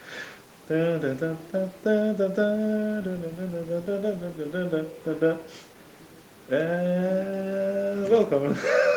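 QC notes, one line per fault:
No faults; room noise sits about 27 dB below speech.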